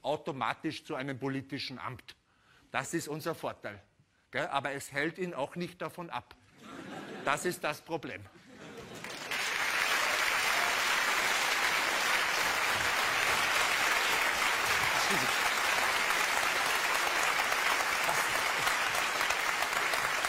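A loud pop interrupts the sound at 13.81 to 13.84 s, a single sharp transient that rises a few decibels above the surrounding material while the sound continues underneath it. The pulse lasts only about 20 ms, consistent with a sudden voltage step entering the signal chain and being shaped by the circuitry that follows. A likely source is a switch, plug contact, static discharge or driver glitch at that moment.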